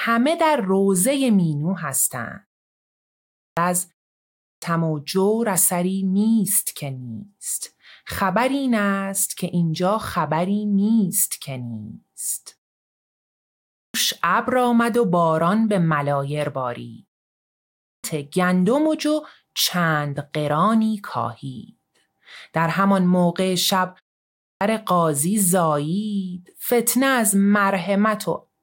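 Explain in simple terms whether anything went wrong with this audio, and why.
The playback device dozed off during silences and woke too slowly, a clipped start after a pause: roughly 0.4 seconds of speech vanished at 3.21, 4.2, 13.54, 17.62 and 24.24 s.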